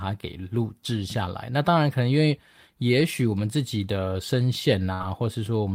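Right near the end, from about 4.93 to 5.07 s, there's a burst of packet loss. A run of audio never arrived in time, so the receiver stretched the last sound it had for roughly 64 ms, fading it down as it went. That stands in for about 60 ms of missing audio. When the speech picks up again it has jumped ahead slightly, with around 11 ms simply gone.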